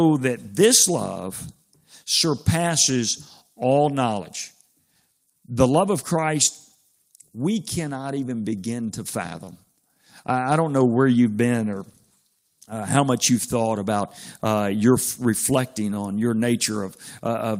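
Clock drift between sender and receiver runs through the whole recording: the sending side's clock is about 3% slow, so the receiver's jitter buffer keeps draining. The speech arrives too sparsely to play at full rate, which leaves the timing slightly uneven from start to finish.

Repeated timing corrections begin at 0.22 s and continue to the end, as the receiver repeats short pieces to cover the shortfall, in all adding roughly half a second. The speech plays at about 97% pace, with small, irregularly spaced hiccups and a faintly unsteady tempo.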